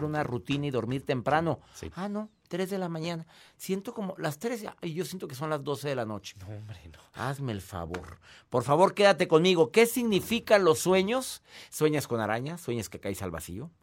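At 4.67 s and 7.88 s the speech jumps, each losing about 10 ms, likely a dropped buffer (overrun). It is joined straight across, with no silent gap.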